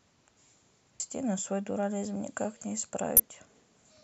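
Damaged data in the compressed stream of this speech clip makes the decoder misread two stretches of frames and lose sync until it finds a valid frame header. Each break is heard as a short chirp or blip lasting about 30 ms, from 0.97 to 1.00 s and from 3.17 to 3.20 s.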